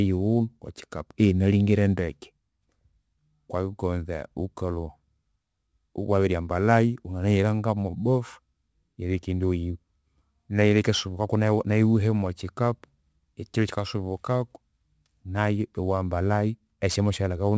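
Throughout the whole clip, the speech carries aliasing. The sample rate was cut, most likely from 44.1 kHz to 16 kHz, without first removing content above the new 8 kHz limit. That upper material folds back below 8 kHz as unrelated tones roughly 30 dB under the voice, so sibilants sound gritty and metallic. Unlike a clean band limit, which just sounds dull, the spectrum stays busy right up to the 8 kHz edge.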